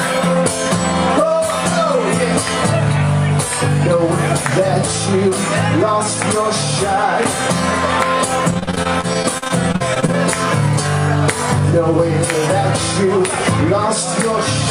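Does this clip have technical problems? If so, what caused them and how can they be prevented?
Yes. From 8.51 to 10.15 s the sound turns choppy and robotic, with small pieces dropping out. This is repeated packet loss (robotic sound). Short holes, none longer than about 41 ms, kept recurring. Each was covered by stretching the last received sound, about a quarter of that stretch in all, which creates the mechanical timbre. To prevent it, use a stable wired connection or a larger jitter buffer.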